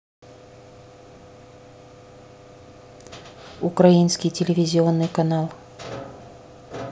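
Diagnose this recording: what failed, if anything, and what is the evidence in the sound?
No fault appears anywhere in this speech recording.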